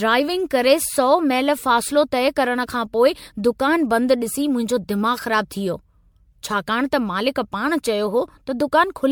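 Generation loss runs throughout. The speech sounds swirly and hollow, with blurred attacks. It likely comes from about seven re-encodes, fitting a 96 kbit/s MP3.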